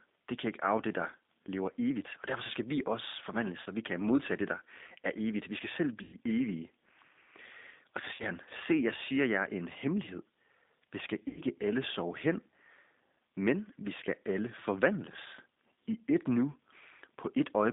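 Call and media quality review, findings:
G.729 codec, whole call: narrowband, roughly 200 Hz to 3.7 kHz, nothing up top. Clearly rough, slightly synthetic speech from the 8 kbit/s CELP-style rebuild (filter, pitch predictor, sparse pulses), which points to G.729A on the path.

VoIP packet loss concealed by the speech codec, four hits: 3.62–3.67 s (40 ms), 6.03–6.17 s (100 ms), 8.14–8.25 s (50 ms) and 11.28–11.41 s (90 ms). The decoder stretches the last pitch and filter into a fading buzzy tone or coloured noise, and speech stays weak briefly after each gap. Network-side loss.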